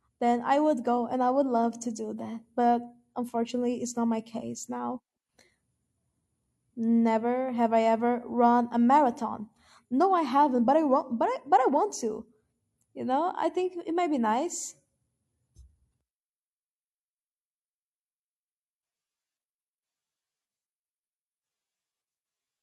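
No technical faults can be heard anywhere in the speech recording. There is nothing to place on the timeline and no value or cause to report.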